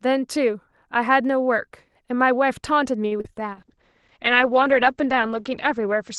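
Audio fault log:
3.07 to 3.12 s: short stall from a late packet. A packet arrived late and the jitter buffer ran dry, so the receiver held the last sound for about 38 ms and then resumed where it left off. Nothing is lost, but that moment drags, with a slight buzz or dip, and playback runs about 38 ms later afterwards.
3.18 to 3.20 s and 3.21 to 3.25 s: short concealed packet loss. Two brief gaps of about 20 ms and 30 ms never reached the decoder in time. The receiver patched them by extending the preceding sound before blending back, which is heard as a quick smear or wobble.
3.53 s to the end: call bitrate drop. The bandwidth estimate fell, and the Opus encoder went from 40 kbps to 12 kbps, staying at the lowest rate for about 1.9 s. Coarser coding makes the speech rough and watery, and the audio band narrows from 12 kHz to 8 kHz, which dulls the top end.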